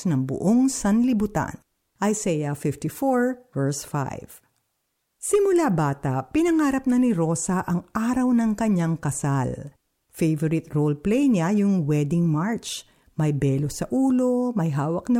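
No technical faults can be heard in this speech recording.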